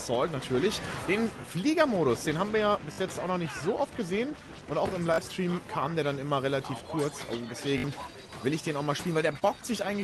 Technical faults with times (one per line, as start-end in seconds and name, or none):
1.42-1.44 repeated buffer
2.92-2.98 repeated buffer
5.14-5.18 repeated buffer
7.78-7.84 repeated buffer
9.39-9.43 short concealed packet loss